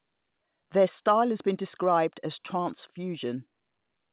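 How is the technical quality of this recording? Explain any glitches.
No glitches or faults audible.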